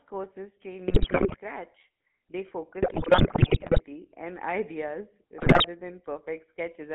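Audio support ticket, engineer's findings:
GSM full-rate codec, throughout. Band-limited to roughly 150 Hz–3.4 kHz, nothing above. Plainly buzzy, gravelly texture. Vocal-tract model excited by regular pulse train at every third sample; fine detail lost, roughness heard. Sound points to a 13 kbps GSM full-rate path on the call leg.

GSM bit errors at 0.88–1.37 s (right after "courses train"), 2.82–3.83 s, 5.38–5.66 s. Squawks, pops, gargling. Corrupted filter, pitch and gain parameters reaching the decoder, so spectrum bends and level jumps frame by frame. Heaviest at 5.38 s. Likely cause: weak radio link.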